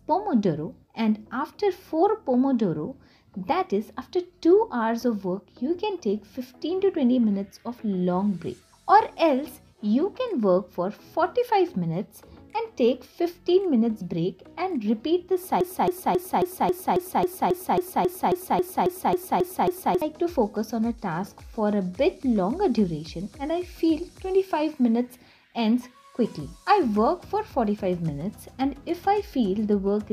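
A broken-record loop, likely from a stalled player or stream resending its last fragment, repeats a 0.27 s piece sixteen times from 15.61 to 20.02 s, losing the audio meant for that span.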